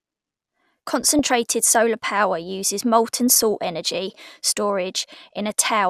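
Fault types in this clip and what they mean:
DAB burbling: bit errors slipping past error correction corrupt MP2 sub-band samples and scale factors, giving short noise blips in single bands over the speech at 1.05–1.32 s, 3.30–3.43 s and 5.40–5.66 s.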